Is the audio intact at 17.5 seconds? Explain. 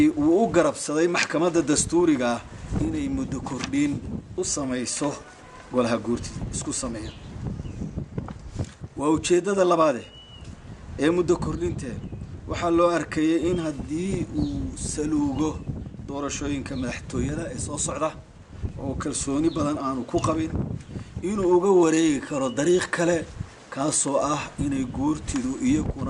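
Yes, the audio is intact at 17.5 seconds, with no dropout, click, distortion or other fault audible at that moment.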